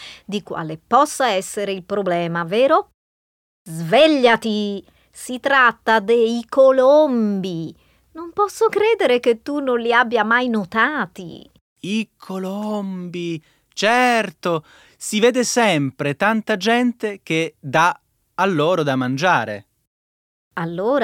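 No technical faults can be heard anywhere in the speech.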